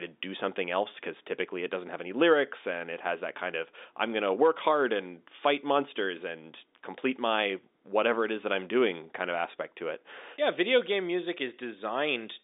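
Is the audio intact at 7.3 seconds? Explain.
Yes, the audio is intact at 7.3 seconds, with nothing there beyond the narrow telephone band of the G.711 line coding, which carries sound only up to about 3.8 kHz.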